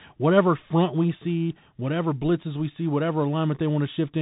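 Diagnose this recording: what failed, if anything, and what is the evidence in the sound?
The codec stage failed: the speech runs through a Bluetooth CVSD headset codec for the whole clip. The band stops near 3.8 kHz, so the sound is narrowband. Coding damage is plainly audible. A granular hiss sits under the speech, sibilants turn scratchy, and loud high-frequency energy distorts. That points to a 64 kbit/s CVSD link, where each one-bit sample only steps up or down and the adaptive step cannot keep pace with fast, loud changes.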